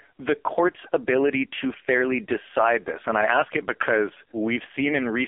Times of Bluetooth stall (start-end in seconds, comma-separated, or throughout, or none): none